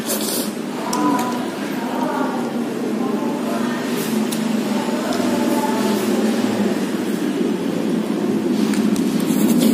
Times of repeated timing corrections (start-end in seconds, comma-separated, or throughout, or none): none